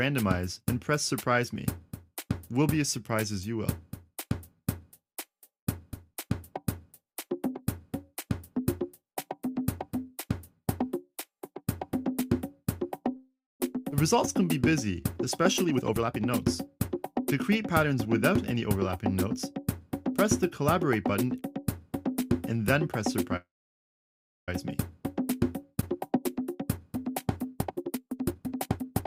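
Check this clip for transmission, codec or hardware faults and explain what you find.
The clip has network delivery faults: two call audio freezes, a skip ahead, a jitter buffer slow-down and three jitter buffer speed-ups.

Call audio freeze, 13.16 to 13.61 s and 23.36 to 24.49 s. The sound is stretched into a fading fill, then silence: about 250 ms of silence, then about 1010 ms. Packets were likely held up. The audio then resumes where it stopped.

Skip ahead, 13.91 to 13.93 s. Roughly 150 ms was dropped while later audio waited. Playback jumps forward almost without a gap.

Jitter buffer slow-down, 14.14 to 15.63 s. Repeated pitch periods add 108 ms to refill the buffer. The audio plays at 93% speed, at the same pitch.

Jitter buffer speed-up, 15.65 to 16.25 s at 140% speed, 16.67 to 18.90 s at 107%, and 25.86 s to the end at 127%. Short pieces were cut to reduce delay: roughly 300 ms, 150 ms and one second. 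The audio sounds hurried, at unchanged pitch.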